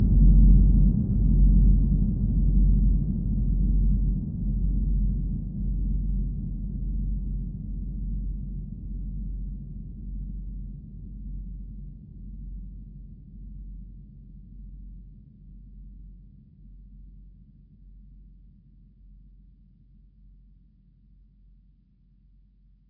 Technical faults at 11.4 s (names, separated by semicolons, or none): none